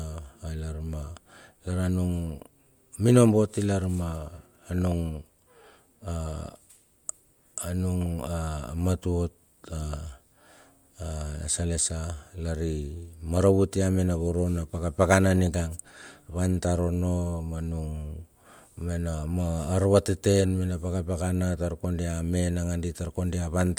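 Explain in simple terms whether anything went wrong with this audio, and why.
Nothing went wrong here.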